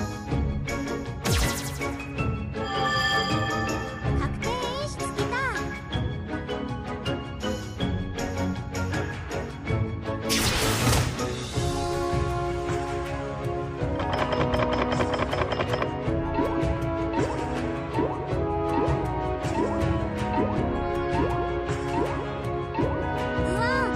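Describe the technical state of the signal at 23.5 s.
At 23.5 s the signal is intact, with no audible fault.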